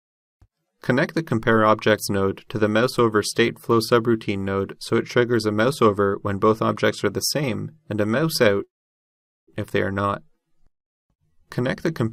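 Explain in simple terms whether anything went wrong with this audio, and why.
A call audio freeze happens from 8.63 to 9.50 s. The sound stalls, a brief fading buzz trails off into near silence for about 0.8 s, then the audio resumes exactly where it stopped. The likely cause is delayed network packets, so nothing is lost but everything afterwards arrives 0.84 s late.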